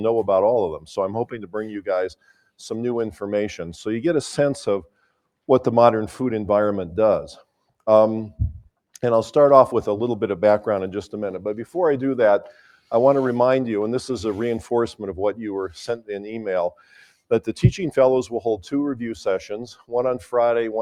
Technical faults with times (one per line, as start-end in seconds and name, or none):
0.00-20.82 noise suppressor applied to music or sounds
1.32-1.55 sound cut by the noise suppressor
2.14-2.48 sound cut by the noise suppressor
4.83-5.19 sound cut by the noise suppressor
16.71-17.14 sound cut by the noise suppressor
19.75-19.92 sound cut by the noise suppressor